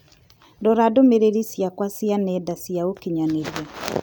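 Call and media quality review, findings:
No faults found in playback.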